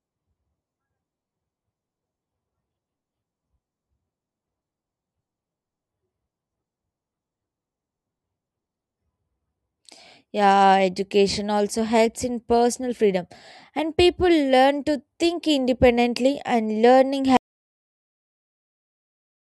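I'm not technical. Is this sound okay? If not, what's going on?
No, it isn't. Right after "think independently and learning", at 17.37 s, the speech cuts off abruptly and the clip ends in dead silence. This is an audio dropout to silence. The last 2.1 seconds contain nothing at all, not even the faint background hiss of the room. That points to the input being lost, most likely through a disconnected device or an accidental mute, while the recording kept running. Whatever was said then is gone.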